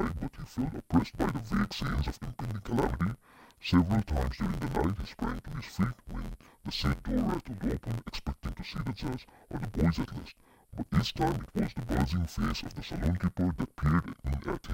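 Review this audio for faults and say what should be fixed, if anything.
Throughout the speech, the audio sounds dull and robotic, with a steady buzz at about 86.1 Hz. This is interleaved audio read as planar. Each block of alternating left and right samples has its first half taken as left and its second half as right, so both halves play at half speed while the overall pace holds. The blocks are short, 11.61 ms, which fits a 512-sample buffer, so the block rate is heard as buzz rather than as an octave drop. To prevent it, match the reader's sample layout to the interleaved format the source actually delivers.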